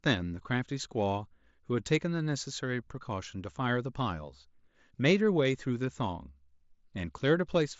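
No technical faults are audible anywhere in this recording.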